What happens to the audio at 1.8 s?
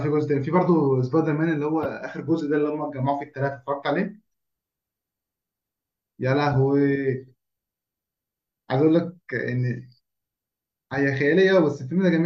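At 1.83 to 1.86 s a corrupt frame is decoded: damaged bits in a couple of compressed frames are played as if valid, so misread gains and codes put energy at the wrong frequencies for that short stretch. It comes out as a brief, fairly loud chirpy burst riding on the speech. Unlike a lost frame, which leaves a gap or a smeared repeat, this adds sound that wasn't there, lasting about two frames rather than a single-sample click.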